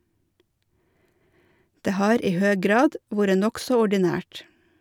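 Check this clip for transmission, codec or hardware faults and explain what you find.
No faults turn up anywhere in this speech recording. There is nothing to point to and nothing that needs explaining.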